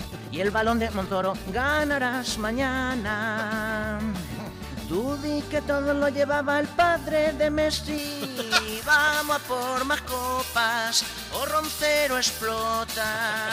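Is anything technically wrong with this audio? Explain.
Yes, there are two faults.

A time-stretched section runs from 0.00 to 2.14 s. The audio moves at about 1.4 times its normal pace while the pitch stays where it should be, so it sounds rushed before the pace abruptly settles. This is likely the result of software squeezing the passage to fit a shorter length, holding pitch steady by dropping short slices of the waveform and splicing the remainder together.

Pre-emphasis left on affects 7.98 s to the end at 13.52 s. The treble was boosted by a pre-emphasis curve, in a shape matching J.17, and the matching de-emphasis cut was never applied afterwards. The top end therefore sits about 11 dB higher at 10 kHz than at 1 kHz. That final stretch sounds thin, bright and sibilant, with the high frequencies pushed forward.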